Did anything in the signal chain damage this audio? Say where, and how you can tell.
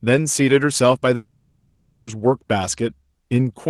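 Yes. The damage happened at the network stage: a long network dropout between 1.15 and 2.10 s, likely caused by packets lost in transit. For those 0.95 s no new audio reaches the listener. The receiver extends the last sound into a fading buzz that covers nearly the whole gap, leaving about 40 ms of silence. The audio then resumes further on, and the missing stretch is gone for good.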